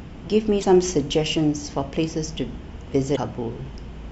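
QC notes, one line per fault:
0.59–0.65 s and 3.12–3.18 s, damaged data in a compressed stream: brief glitches where the decoder hits corrupted frames and loses sync hunting for the next header.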